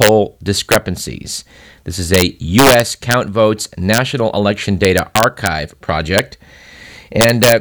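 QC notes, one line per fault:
0.02–0.09 s: integer overflow. Peaks push about 2 dB past the integer ceiling and wrap to the opposite sign, giving sharp cracks instead of soft clipping.
0.72–0.76 s: integer overflow. Loud samples run about 2 dB over full scale, and the values flip across the range, so brief harsh snaps replace flattened peaks.
2.14–2.22 s: integer overflow. About 2 dB of excess level wraps each over-limit peak to the other extreme, producing a short, violent crack on the loud sound.
2.59–3.14 s: integer overflow. One of the two hottest, about 4 dB over. Repeated full-range sign flips give a sustained burst of crackling, much rougher than clipping.
3.94–3.98 s: integer overflow. Peaks about 2 dB above the limit wrap around rather than being limited, heard as a quick, sharp crack.
4.85–5.47 s: integer overflow. For over half a second, peaks about 2 dB too loud keep wrapping to the opposite sign, leaving a stretch of harsh, spiky cracking.
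6.18 s: integer overflow. A brief overload about 4 dB over full scale flips peaks across the range, producing a hard crack.
7.21–7.52 s: integer overflow. Peaks about 3 dB over the ceiling wrap instead of saturating, producing violent cracks through the loud passage near the end.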